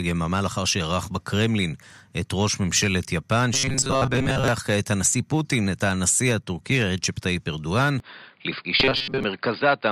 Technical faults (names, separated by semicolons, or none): robotic sound from repeated short buffers; input switched to a poorer device